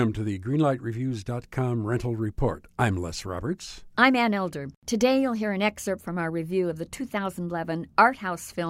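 Speech with no audible faults.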